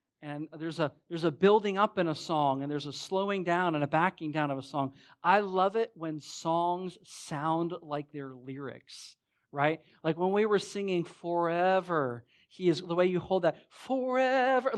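Nothing here calls for comment; the speech comes through the call path in one unbroken stretch with no dropouts, glitches or other faults to point to.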